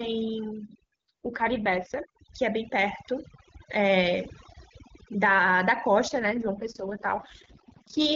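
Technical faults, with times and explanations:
Throughout, overdone noise removal: a noise reduction stage set far too aggressively suppresses individual frequency bands whenever their level sits close to its noise estimate. Quiet detail in the speech falls below that threshold and is cut along with the hiss. The background drops and breaks up into twinkling, chirpy specks.
1.08 to 2.00 s and 6.07 s to the end, AMR rate drop: the wideband AMR link, which at its normal rate codes speech cleanly, falls back to a much lower rate, the sound pointing to a step from 23.85 to about 6.6 kbit/s, so more of the bitstream goes to error protection. The bandwidth holds and nothing drops out, but the voice turns rough, raspy and synthetic for both stretches, easing back after the first stretch when the higher rate returns, while the second lasts until the clip ends.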